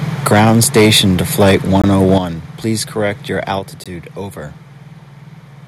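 It's a short speech clip with three separate problems. From 0.26 to 1.07 s and again from 1.39 to 2.18 s the loud syllables get a harsh, crackly edge, with peaks flattened at the top. That's microphone overload, likely from the input volume being set high enough to push the signal about 8 dB and then about 6 dB past the converter's limit, chopping off roughly a tenth of the samples in the first stretch and around one in twenty in the second. You can also hear the microphone volume stepped down three times: at 0.33 s by about 4 dB, at 2.18 s by about 9 dB right as the second overload ends, and at 3.59 s by about 5 dB. Voice and background drop together in a sudden step, likely the call software reacting to the clipping by turning the device's input gain down in one jump. Finally there's a gap between chunks at 1.82 s and 3.84 s. These are 20 ms holes of silence with hard edges that land every 2 s, which points to the audio being handled in 2-second chunks with a bit of dead air inserted at each join.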